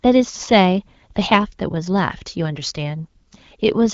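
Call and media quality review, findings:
No faults found in this speech clip. The wideband coding is audible as slight texture with content reaching up to about 7 kHz, which fits AMR-WB (HD Voice) at 12.65 kbit/s.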